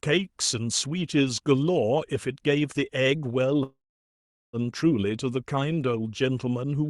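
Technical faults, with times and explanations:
3.63–4.56 s, call audio freeze: fading buzz, then silence; the sound resumes where it stopped with nothing skipped, unlike a dropout. Likely late packets emptying the jitter buffer.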